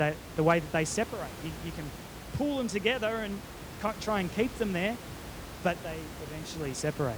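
The speech recording has nothing technically wrong with it. Background noise from the room sits about 12 dB below the speech and belongs to the recording itself.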